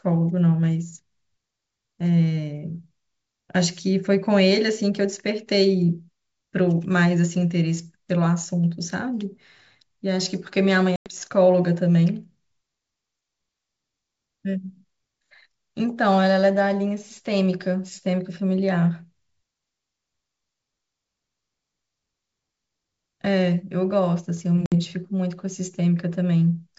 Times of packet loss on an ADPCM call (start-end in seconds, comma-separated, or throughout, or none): 10.96-11.10, 24.66-24.75